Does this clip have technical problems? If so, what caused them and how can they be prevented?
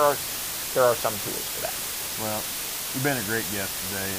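Yes. Low bit depth with dither runs through the whole clip. The audio has been reduced to only about 4 bits, and dither noise was added before the samples were rounded to those few levels. That turns what would be harsh, signal-dependent quantization distortion into a steady, even hiss with no gritty distortion, but at 4 bits the hiss sits nearly as loud as the sound itself. To prevent it, keep recording, processing and export at 16 bits or more.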